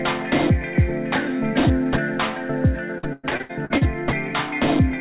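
Between 2.98 and 3.83 s, packets were repeatedly lost or arrived too late. Seven separate holes open up, the longest about 103 ms, and each is patched by stretching the preceding sound, so roughly 41% of that span is concealment rather than real audio. The result is repeated packet loss with a robotic sound: choppy and stuttering, with pieces missing, all within a band that stops at 4 kHz on the G.711 call path.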